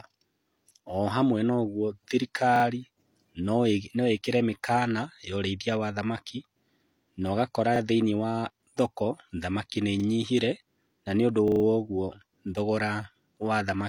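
At 2.56 to 2.64 s, 7.76 to 7.80 s (just before "thĩinĩ wa thoko thamaki"), 10.00 to 10.04 s (after "wa thoko thamaki nĩ") and 11.48 to 11.64 s (after "na nĩũndũ"), the speech stutters from a repeated buffer. Fresh audio arrived late, so the same slice, about 40 ms long, was played again: twice extra at 2.56 s, once at 7.76 and 10.00 s, and four times at 11.48 s. Unlike a dropout, there is no silence and hardly any speech is missing. Instead, identical copies follow each other with hard joins, which gives a rhythmic stutter rather than a gap.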